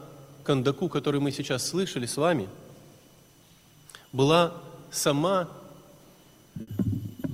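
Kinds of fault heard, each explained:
Burst of packet loss: Several consecutive packets failed to arrive in time, so the receiver had nothing to play for a short stretch near the end, around 6.61 to 6.69 s. It covered the gap by extending the last sound it had for about 60 ms and fading it out, which is heard as a brief held buzz or hiss. When the audio picks up again, about 60 ms of the original sound is gone.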